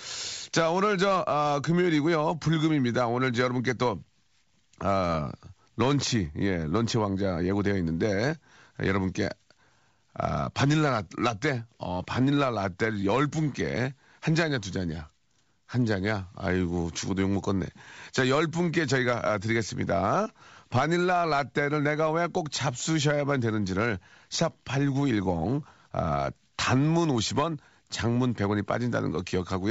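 A speech clip carried over G.722 wideband coding. Bit errors on an ADPCM link cause a rough burst with pops from 5.09 to 5.16 s. Each flipped bit throws off the decoder's step size and predictor, so the damage rings on briefly. The length fits a low error rate hitting a handful of frames.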